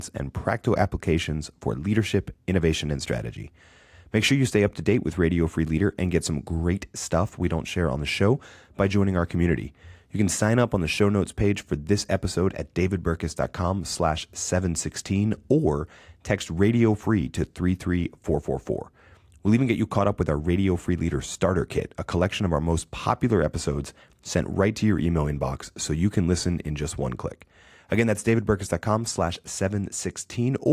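No technical faults are audible anywhere in the recording.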